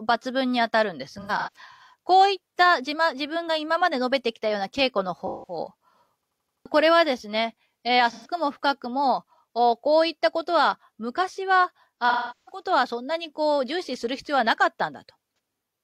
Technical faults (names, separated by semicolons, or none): AAC frame loss with concealment; system hang loop